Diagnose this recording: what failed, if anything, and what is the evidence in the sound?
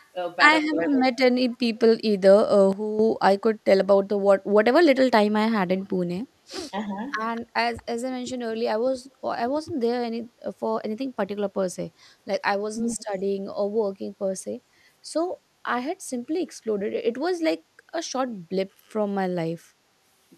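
Echo leak sits in call processing. A faint, discrete copy of the speech returns at 0.0–0.08 s, 0.85–1.57 s, 5.81–5.86 s, 7.35–7.83 s and 12.81–13.04 s. It lags by 244 ms early on and 232 ms later, at about 25 to 35 dB below the main speech. The likely cause is a far-end loudspeaker's echo that the canceller failed to remove. Room reverberation would smear continuously behind the speech. This is a separate repeat at a fixed delay.

Speech suppressed in double talk is also a call-processing fault. At 0.71–0.93 s the speech drops by roughly 10 dB for about a tenth of a second in total. At 12.97–13.01 s it dips by roughly 15 dB in a brief bite. Both dips coincide with echo bursts, so the other side was active. The canceller likely could not separate the near talker from the returning echo and attenuated both. It differs from a gain change because the dips come and go with the other side's activity.

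The sudden gain jump comes from a digital gain stage in call processing or the driver. At 2.73 s the level steps down by 9 dB until 2.99 s. At 6.70 s it drops by 6 dB and stays there to the end. Speech and background noise fall together, instantly, with no ramp. That points to a gain setting likely applied sample-to-sample rather than smoothed. Unlike double-talk suppression, it ignores what the other side is doing and moves the noise floor too.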